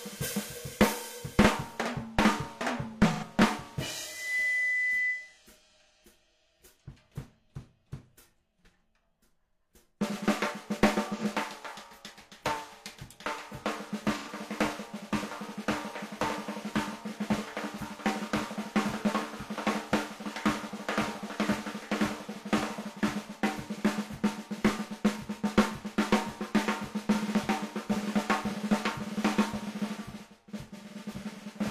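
AAC frame loss with concealment first appears from 3.12 to 3.24 s, a gap of about 85 ms that fits two missing frames. With no data for that stretch, the decoder rebuilt the sound from the last good spectrum, randomising signs or interpolating energy, so the everyday sound turns briefly smeared, noisy or phasey instead of dropping out.

Loudspeaker feedback squeal follows from 4.06 to 5.38 s. A microphone was picking up the loudspeaker it fed, and at 2 kHz the loop gain rose above one. That single tone builds over roughly 0.3 s into a sustained squeal sitting about 5 dB above the sound, and it holds until it stops at 5.38 s.

The same concealment patch returns from 11.18 to 11.25 s, shorter at about 43 ms, which fits one lost frame. It comes back once more from 14.17 to 14.29 s, again about 85 ms long.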